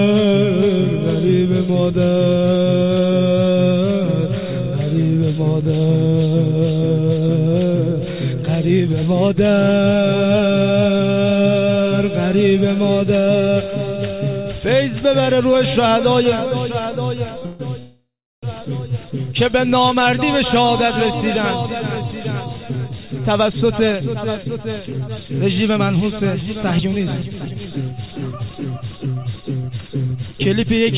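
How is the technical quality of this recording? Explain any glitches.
The recording has a cluster of playback interruptions around 17 to 18 seconds and a stretch of hurried playback later on. All of it is heard through narrowband call audio with nothing above 4 kHz, which fits a G.711 A-law call codec.

At 17.38 to 17.44 s a sound is held about 36 ms too long, with a faint buzzy smear before it carries on. This is a short stall from a late packet. A packet missed its playout time, the jitter buffer ran dry, and the receiver stretched the last sound to bridge the gap. When the packet arrived, playback resumed from the same point, so nothing was lost and the audio was simply delayed by 36 ms.

Two call audio freezes follow. From 17.46 to 17.61 s the sound is drawn out for 138 ms as a buzz that never reaches silence. From 17.79 to 18.45 s the hold lasts 632 ms: a fading buzz that sinks into about 340 ms of silence before the audio picks up where it stopped. 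The likely cause is packets delayed in transit, leaving the receiver nothing to play but concealment. Because playback resumes rather than skips ahead, each freeze inserts a gap instead of removing material.

From 22.04 to 29.07 s the audio runs about 11% fast, at 111% speed, with pitch unchanged, so it sounds rushed and loses its even pacing. This is a jitter buffer speed-up. The buffer had built up more delay than it targets. To work that backlog off, the receiver repeatedly cut out tiny slices of one or a few pitch periods, trimming roughly 0.7 s in total over those seven seconds.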